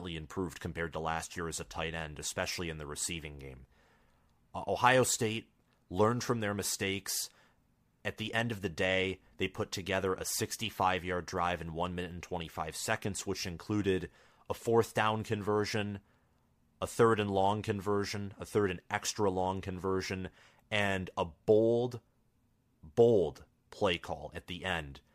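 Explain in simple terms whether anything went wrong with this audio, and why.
Nothing went wrong here; the speech comes across without any technical problems worth pointing out, so there's really nothing to explain.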